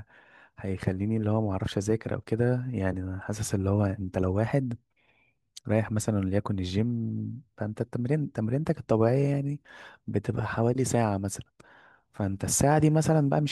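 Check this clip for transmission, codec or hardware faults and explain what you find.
No transmission, codec or hardware faults are audible anywhere in this speech recording.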